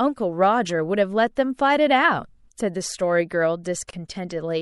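All the way through, the speech has a watery, swirly quality, with the s sounds going a bit metallic and chirpy. That's most likely MP3 compression, and at a fairly tight budget, since the damage is plainly audible, which fits a bitrate somewhere around 64 kbps. Short of bits, the encoder keeps dropping quieter detail in and out frame by frame, so consonant attacks smear too.

Then, from about 3.91 to 3.93 s, there's a gap at a join of encoded pieces: the sound just drops out for roughly 27 ms and picks up again right where it left off. It happens because separately encoded chunks were stuck together without trimming, so one encoder's start-up delay and the other's padded final frame both stayed in as a bit of silence. The edges are smeared by the codec.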